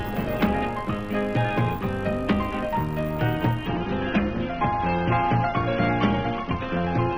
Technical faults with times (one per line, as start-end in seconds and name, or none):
3.66-7.18 adaptive stream at a lower bitrate